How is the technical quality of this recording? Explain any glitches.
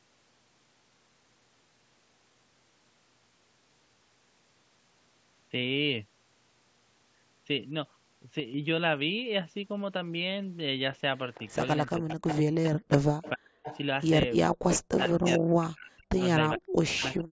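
The recording has three kinds of call-path fault, all from about 8 s onward: one abrupt level step, then a stretch where loudspeaker echo and echo-canceller suppression trade off against each other. The bandwidth stops at 8 kHz, consistent with call microphone processing.

Sudden gain jump, 8.4 to 8.54 s: the level falls by about 6 dB in a single step rather than a smooth fade. Voice and background noise drop together, which is the sign of a digital gain change rather than the talker speaking more quietly. The likely cause is a gain setting applied instantly, without a ramp, in the capture or processing chain.

Echo leak, 11.34 to 12.37 s, 13.23 to 13.3 s, 13.64 to 14.07 s and 14.69 to 15.3 s: a faint, delayed copy of the near-end voice trails it by 439 ms, sitting roughly 10 to 20 dB below the speech. It is strongest in the last burst. This is likely residual loudspeaker echo that the far end's echo canceller failed to remove, so its microphone sent the leftover back down the line.

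Speech suppressed in double talk, 11.97 to 13.68 s, 14.5 to 16.19 s and 16.56 s to the end: during the overlap sections the far-end voice dips and breaks into pieces. At its worst it drops by around 40 dB, close to silence. The likely cause is an echo canceller that could not separate live talk from the returning echo and so attenuated everything whenever both sides were active.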